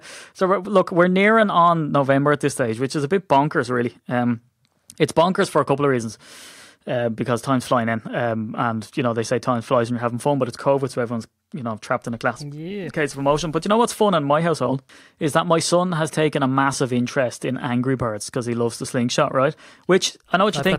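Nothing stood out on listening to this speech recording.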